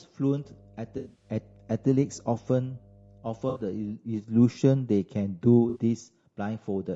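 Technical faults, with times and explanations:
Throughout: low-delay AAC compression. The speech sounds rough and grainy, with noise between harmonics and a synthetic top band, likely from AAC-ELD short frames at a low bitrate.
0.41–3.96 s: mains hum. A steady 50 Hz tone with low harmonics sits about 30 dB below the speech, consistent with power-line coupling through a ground loop.
0.97–1.29 s, 3.49–3.60 s, 5.69–5.78 s: AAC frame loss with concealment. The decoder patches missing frames from the last good spectrum, giving smeared, noisy, phasey gaps. The first burst is scattered, with runs up to roughly 70 ms.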